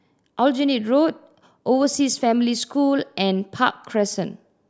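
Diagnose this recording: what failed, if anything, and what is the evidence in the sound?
Nothing failed: no stage from capture to playback leaves any audible defect anywhere in this speech recording.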